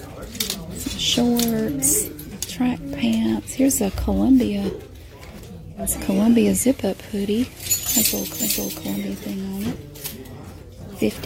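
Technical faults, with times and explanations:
5.75 to 8.57 s: digital radio blending to analogue. The receiver loses the digital stream and cross-fades over about 306 ms to the FM broadcast. Hiss rises, sitting roughly 30 dB below the signal. Level shifts by about 1 dB.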